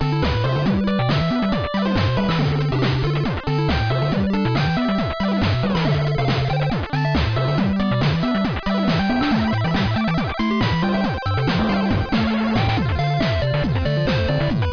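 No dropouts, clipping, glitches or other technical faults can be heard anywhere in the clip.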